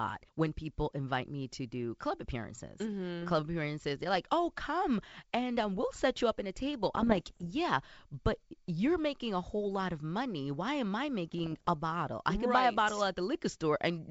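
Bit errors on an ADPCM link hit this speech clip at 6.95–7.53 s and 11.32–11.69 s. Each flipped bit derails the decoder's step size and predictor, causing pops and rough bursts.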